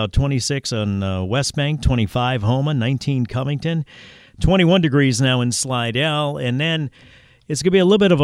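No technical faults can be heard in the speech here. Nothing in the recording calls for a time marker or a diagnosis.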